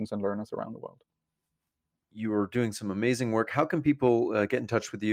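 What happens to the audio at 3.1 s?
Nothing goes wrong at 3.1 s; the speech carries on intact through that moment.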